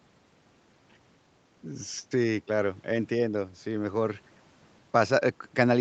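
Nothing stood out on listening to this speech, which carries the usual call microphone processing, with the lowest bass trimmed away and nothing above 8 kHz.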